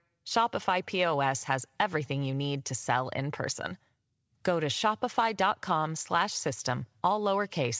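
No faults can be heard in this speech; it has passed through a WebRTC call path whose wideband coding keeps nothing above about 8 kHz, which fits G.722 at 64 kbps.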